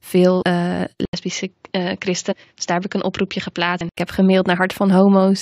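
Compressed frames skipped at 0.41 to 0.43 s: whole blocks of coded audio never reach playback, either missing from the stream or rejected by the decoder as corrupt, so the sound leaps forward by about 100 ms, roughly five of its 23.2 ms frames.

Input switched to a poorer device from 1.05 to 3.97 s: the sound drops out for 80 ms, then returns about 5 dB quieter and duller, with nothing above 7.3 kHz and a new noise floor about 45 dB below the signal. It then clears up again at 3.97 s. The likely cause is the recording moving to a different, narrower-band microphone or headset profile and then back.

Compressed frames skipped again at 2.31 to 2.33 s and at 3.80 s, both inside the switched stretch. Each time the decoder drops whole frames, so the sound jumps ahead by about 150 ms, roughly seven frames.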